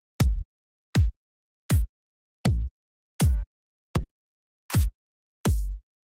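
The audio has a burst of packet loss at 4.03 to 4.11 s. Several consecutive packets never arrived in time. The receiver extended the preceding sound for about 60 ms, fading it down. Playback then jumps ahead, skipping about 60 ms of audio.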